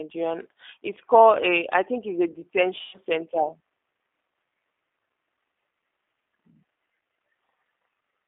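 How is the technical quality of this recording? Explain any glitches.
Quality's limited: you're hearing phone-grade speech through a low-bitrate voice codec, plus one short dropout.

G.729 codec, throughout: The audio sits in a narrow line band of about 300 Hz to 3.6 kHz, so there's no low body and no air on top. At 8 kbit/s the decoder is rebuilding the voice from a vocal tract filter, a pitch predictor and a few pulses per frame rather than sending the waveform itself. The codec damage is plainly audible as a slightly rough, synthetic edge on the speech.

VoIP packet loss concealed by the speech codec, 2.81 to 2.98 s: About 120 ms of audio went missing, which fits four lost packets. The decoder covered the gap by extrapolating from the last pitch and filter it had and turning the gain down frame by frame. You hear the sound smear into a buzzy tone or a coloured noise that fades. Because each frame builds on the previous one, the speech stays a bit weak or distorted for a moment after the real audio comes back.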